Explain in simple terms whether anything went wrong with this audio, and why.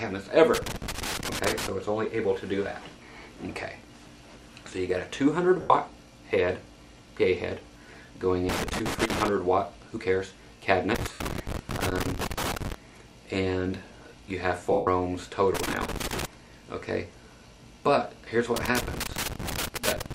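A loose connector crackle comes from a worn or dirty contact that keeps connecting and disconnecting as it shifts. It chops up the sound and adds irregular crackling and scratching at 0.54 to 1.69 s, 8.49 to 9.28 s, 10.95 to 12.74 s, 15.55 to 16.25 s, and 18.56 s to the end.

Lost LE Audio frames happen when pieces of the Bluetooth stream go missing and the receiver patches the gaps by reusing the last sound it got, jumbled up. You hear brief noisy smears at 5.61 s (90 ms), 11.13 s (70 ms) and 14.72 s (150 ms).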